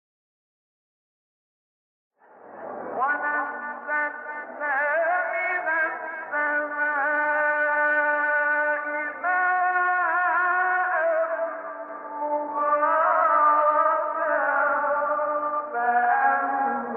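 From 11.89 s until the end, every sound is heard twice: a second full-band copy trails the first by about a tenth of a second, at roughly the same loudness, with no decay or room colour, and it cuts in abruptly rather than fading up. This doubled audio track is likely the result of the same signal being picked up again through a slower path, or two out-of-step copies being held together in an edit.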